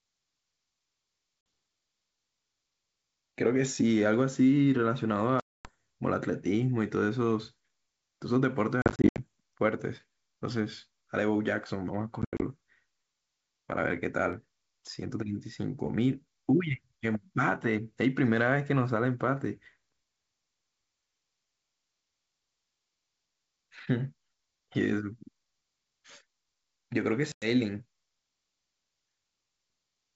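Packet loss on an ADPCM call cuts hard-edged silent holes into the speech at 1.41 s (50 ms), 5.40–5.69 s (250 ms), 8.82–9.20 s (210 ms lost in scattered gaps, longest 70 ms), 12.22–12.43 s (130 ms in gaps, longest 80 ms) and 27.32–27.45 s (100 ms). With whole packets gone, the receiving decoder's predictor and step size lose track of the sender's. Each restart comes back with some distortion before settling.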